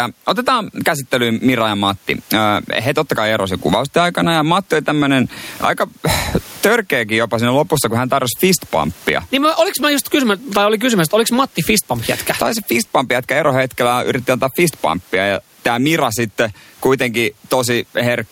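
Gain pumping runs through the whole speech clip: the gain swings by around 15 dB under loud syllables. The likely cause is input gain set far too high with a fast limiter clamping it, squashing loud and soft passages together; the room noise sits about 42 dB below the speech.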